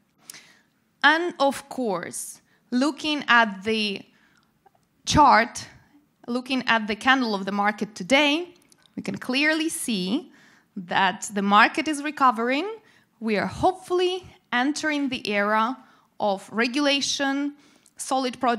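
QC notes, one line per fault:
Nothing to flag here; I listened all the way through and didn't hear anything that needs a note.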